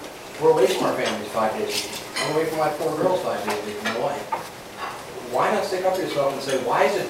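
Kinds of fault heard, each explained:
No technical faults can be heard in this clip. Nothing in the audio points to a problem in how it was recorded or passed along.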